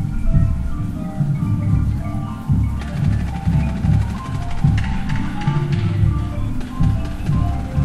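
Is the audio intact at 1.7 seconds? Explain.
Yes, the audio is intact at 1.7 seconds, with no fault audible at that moment.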